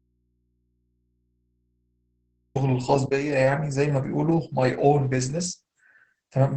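Audio dropout to a faint residue, from the very start to 2.55 s: the speech is already missing when the clip opens, and only a low mains hum remains, roughly 50 dB below the speech. The likely cause is a break in the signal feed while the input stayed live. The speech returns abruptly at 2.55 s, with no fade.

Opus voice compression, throughout: the speech sounds muffled, hoarse and faintly robotic, and nothing is heard above about 8 kHz. This heavy damage fits the SILK linear-prediction coder at a low bitrate, around 10 kbps, where the excitation is coded coarsely.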